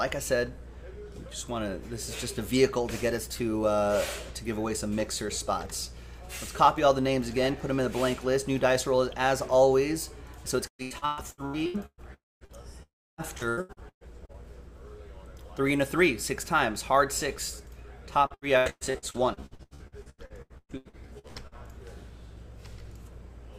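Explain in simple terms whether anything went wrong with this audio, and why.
Repeated packet loss (robotic sound) happened three times: from 10.67 to 12.01 s, from 13.38 to 14.37 s, and from 18.26 to 21.54 s. Small pieces of the audio kept going missing, each under about 0.12 s long. The receiver patched every hole by stretching the last sound, so these stretches sound choppy.

Between 12.14 and 12.44 s, and again between 12.83 and 13.21 s, the sound briefly continues, then drops into silence lasting about 0.2 s and 0.3 s. The likely cause is a long network dropout, where nothing arrived and the missing audio is simply skipped.

Short concealed packet loss occurs between 12.45 and 12.64 s. About 40 ms of audio arrived too late to be played. The receiver filled that gap by continuing the previous sound, which leaves a quick smear or wobble.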